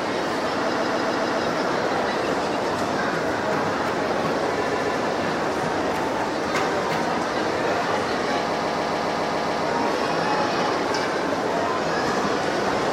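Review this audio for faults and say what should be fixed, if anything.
You've got repeated frames in three spots. A block of about 0.14 s loops back on itself, which fits a run of roughly six compressed frames being written or sent more than once. It plays five extra times from 0.72 to 1.42 s, twice more from 4.69 to 4.97 s, and eight extra times from 8.52 to 9.64 s, so you hear a stutter, and the audio gets about 2.1 s longer overall. To prevent this, check the encoder or transport for duplicate frame writes or resends.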